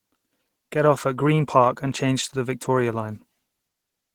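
Opus compression throughout: the speech sounds hoarse and grainy, likely from the encoder's hybrid speech mode, which fits a bitrate near 16 kbps.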